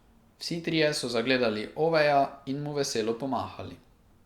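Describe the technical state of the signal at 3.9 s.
At 3.9 s the speech signal is intact, with no audible fault at that moment.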